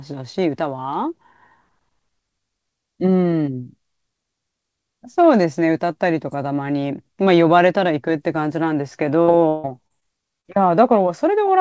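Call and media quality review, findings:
Repeated packet loss (robotic sound), 9.22–10.03 s: four network gaps, longest 157 ms, concealed by extending prior audio over about a third of the span. Speech turns choppy, with pieces missing.

Short concealed packet loss, 10.41–10.46 s: roughly 40 ms of packets late or lost, patched by the decoder's concealment. Brief smear or wobble before the real audio resumes.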